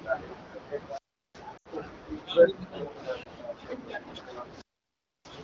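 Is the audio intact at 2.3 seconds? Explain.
Yes, the speech at 2.3 seconds is intact, with no fault at that moment.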